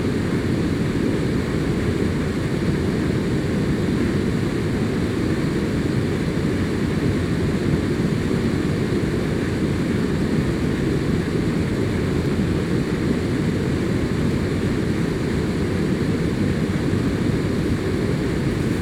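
Regular clicks recur about every 1.03 s from 0.96 s to 18.42 s, roughly twenty in all. They are clock drift buffer slips, likely from two clocks a few hundred ppm apart, each dropping or repeating a small block of samples. A spectrogram shows thin broadband vertical lines at that spacing, and the waveform shows small jumps.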